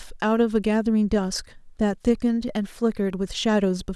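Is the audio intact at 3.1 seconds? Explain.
Yes, the speech at 3.1 seconds plays through intact, with no dropout, click, distortion or other fault at that point.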